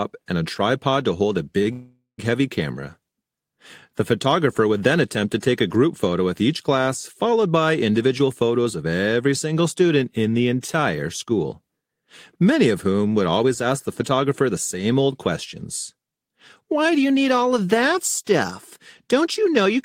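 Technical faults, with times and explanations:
1.63 to 1.68 s, short stall from a late packet: one packet arrived late and the jitter buffer emptied, so the receiver held the last sound for about 29 ms until it turned up. The speech then resumes from the same point, with a brief stretched moment, slightly buzzy or dipping.
1.72 to 2.2 s, call audio freeze: the speech stops and the last sound carries on as a fading buzz or hiss, ending in about 130 ms of silence, roughly 465 ms in all. The likely cause is packets held up in transit draining the jitter buffer. When they arrive, speech continues where it left off.
8.03 to 9.21 s, 13.29 to 14.55 s and 16.6 to 17.82 s, jitter buffer speed-up: the buffer held more audio than its target, so the receiver cut out many short pitch-period pieces to shrink the delay. Speech plays at 111%, 106% and 109% speed at the same pitch, losing about 150, 70 and 100 ms, and sounds hurried.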